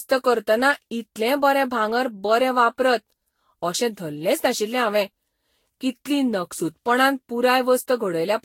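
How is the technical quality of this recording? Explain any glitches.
The technical quality is poor throughout, because of generation loss. The speech was most likely decoded and re-encoded with a lossy codec about seven times. The character of the artefacts points to Vorbis at around 62 kbit/s. Each pass requantised the audio on a shifted frame grid, so the errors and spectral gaps piled up. The result sounds swirly, hollow and smeared beyond what that bitrate alone would produce, consonant attacks are blurred, and nothing remains above 16.6 kHz.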